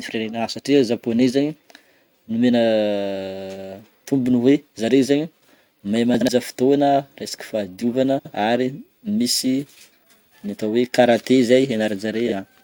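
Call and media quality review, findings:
Frames out of order, speech garbled into brief flutter: 6.14–6.29 s, 8.18–8.33 s (just before "ary misy"), 12.27–12.33 s. Likely jitter-buffer reordering, with adjacent blocks of about 70 ms and 23 ms swapped, which fits 23 ms codec frames. Unlike packet loss, no gap and no lost time.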